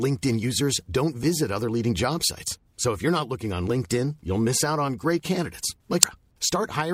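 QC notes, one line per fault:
6.03 s: damaged data in a compressed stream. A short blip cuts through the speech, lasting only a few milliseconds. Some bytes in the compressed stream were corrupted at this point. The decoder could not read the affected frame correctly and lost sync with the frame boundaries. It output garbled samples until it locked onto a valid header again. That brief stretch of misdecoded data is the burst you hear.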